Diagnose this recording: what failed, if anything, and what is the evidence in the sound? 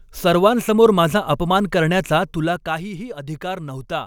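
Zipper noise sits in the gain stage, at the driver or buffer level. From 2.15 to 2.83 s the speech drops by around 10 dB with a fine ticking riding on it. The gain moves in unsmoothed steps, roughly forty a second. Each step clicks.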